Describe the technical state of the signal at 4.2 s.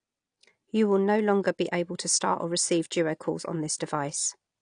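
At 4.2 s you're hearing the same thing that runs through the whole clip: low-bitrate audio saved at a high bitrate. The speech has nothing above about 9.8 kHz, and the leftover coding artefacts point to an earlier pass through a very lean codec, something like 32 kbit/s AAC. It was likely then re-encoded as a roomy MP3, around 256 kbit/s. That second pass keeps the damage intact but can't restore the missing top end.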